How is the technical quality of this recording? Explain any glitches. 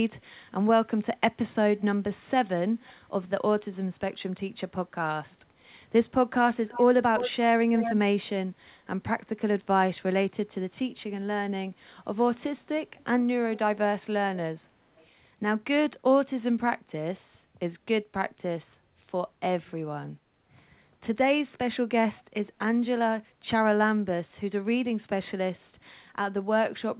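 The recording carries audible echo leak, heard over band-limited call audio with nothing above 4 kHz, which fits a narrowband G.711-style codec.

Echo leak appears at 2.8–2.93 s, 6.7–7.95 s, 12.98–13.59 s, 14.97–15.06 s and 22.17–22.23 s. A far end's echo canceller likely failed to remove loudspeaker sound, returning delayed copies of the speech 330–390 ms late. Mostly faint scraps, but around 7 s the echo is strong and clearly audible.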